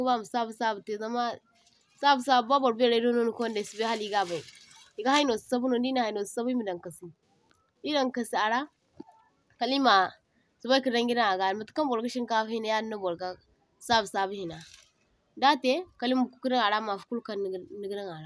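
No technical faults are audible.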